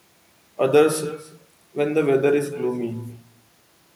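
Echo with no canceller runs through the entire speech clip. At the far end the call is being played over a loudspeaker, and that end's microphone picks it up again. No echo cancellation removes that pickup, so the talker's own speech comes back after the network round trip, around a third of a second late. The returning copy sits about 16 dB below the direct speech. It sounds thin, trailing each phrase like a faint shadow.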